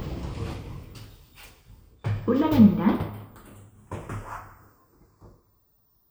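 A slow flanging sweep runs throughout, from channels drifting apart: separate clocks about 40 ppm apart slide the inter-channel delay to roughly a fifth of a millisecond.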